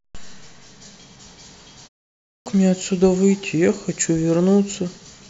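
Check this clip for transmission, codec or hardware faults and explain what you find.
One hardware fault appears, a clipped start after a pause. From 2.26 to 2.46 s, after a 0.46 s pause, speech resumes abruptly with its first 0.20 s missing, because the output device had slept during the silence and was still waking.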